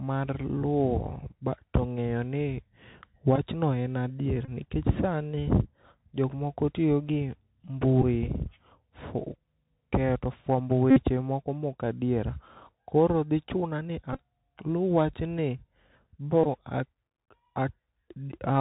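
The speech runs through the Bluetooth CVSD headset codec for the whole clip. Its 64 kbps one-bit delta coding passes nothing above 4 kHz and leaves scratchy s sounds and granular hiss. A spectrogram shows a hard ceiling at 4 kHz with a grainy noise floor.

Bluetooth headset packet repeats occur at 3.36 s just before "en adier nikech sani", at 4.45 to 4.50 s between "en adier" and "nikech sani", and at 8.02 s, 10.91 to 11.03 s after "keyo to fwambo", 14.13 to 14.19 s (scattered) and 16.44 s. Each replays the last packet, giving a buzz near 267 Hz that shows as evenly spaced repeated waveform segments.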